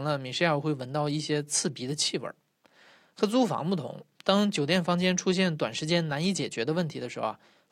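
The speech signal carries no audible technical faults anywhere in the recording.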